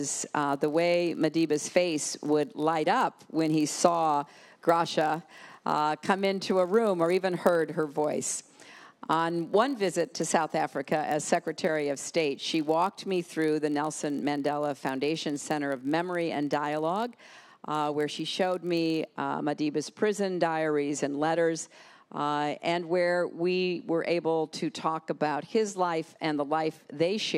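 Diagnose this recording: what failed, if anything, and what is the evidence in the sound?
A block size mismatch (padded) in the driver or buffer stage: each block is shorter than what the next stage reads, and the gap is zero-filled. From 0.0 to 19.19 s this produces a steady 46.9 Hz buzz, which fits a 1024-sample read block, while pitch and timing stay essentially unchanged.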